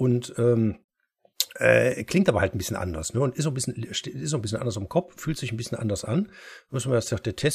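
Around 0.80 to 0.82 s there's damaged data in the compressed stream: the decoder misreads corrupted frames, loses sync briefly, and spits out a quick glitch.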